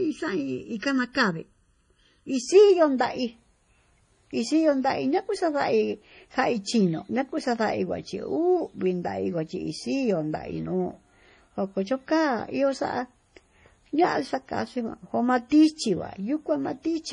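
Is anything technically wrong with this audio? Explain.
Yes. There are three kinds of fault in this speech clip.

MP3 compression runs through the whole clip. The sound is heavily damaged. It has a watery, swirly quality, and attacks are smeared. Nothing is present above 10.5 kHz, a fixed treble cut. The likely cause is MP3 encoding at a low bitrate, which fits around 32 kbps. With so few bits, the encoder drops weak frequency lines. Those lines flicker on and off between frames, and that flicker makes the swirl.

Channel delay (comb filtering) affects the start, from 0 to 2.43 s. One channel arrives late by about 0.7 ms. Mixed to mono, the shared content cancels at evenly spaced frequencies. The first notch sits near 700 Hz, and further notches follow above it. The result sounds hollow and phasey. The notches stay fixed for that stretch. After 2.43 s the hollowness is gone.

Pre-echo occurs twice. 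The first spans 0.79 to 0.82 s, a spread of 33 ms. The second is at 2.98 s, over 19 ms. In each case a sharp attack falls late in a codec block. The coding noise is spread across the whole block. That noise fills the quiet moment before the attack. You hear a short hiss just ahead of each onset. The attack itself sounds soft and smeared.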